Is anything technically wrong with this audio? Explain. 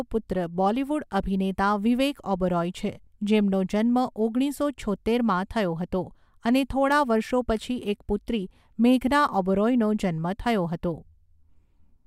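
No, nothing technically wrong can be heard in this speech recording. No fault turns up anywhere in the clip.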